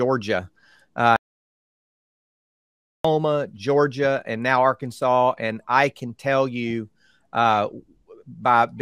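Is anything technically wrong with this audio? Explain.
Yes. An audio dropout to silence runs from 1.16 s to 3.05 s. The input was likely lost through a disconnected device, a failed link or a stray mute while recording continued. Speech cuts off into dead silence without room tone, then resumes mid-flow, losing about 1.88 s.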